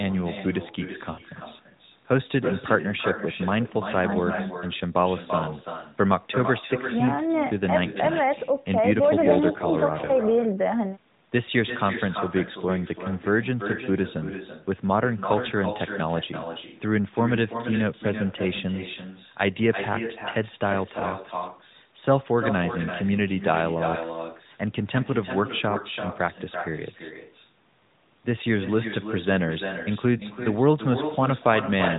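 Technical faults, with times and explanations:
throughout: echo with no canceller. Every phrase returns as a quieter copy, about 9 dB down and roughly a third of a second late. The far end's loudspeaker feeds its microphone and nothing subtracts it. The long, discrete delay sets it apart from room reverberation.
1.12–1.21 s, 10.06–10.10 s, 21.00–21.08 s, 30.18–30.23 s: lost AMR speech frames. The first is a 60 ms run of three frames, and the others are single 20 ms frames. The decoder repeats its last good settings at falling gain, so the sound smears into a brief warble or dip rather than a hard click or clean gap. The narrowband AMR path stays band-limited around these moments.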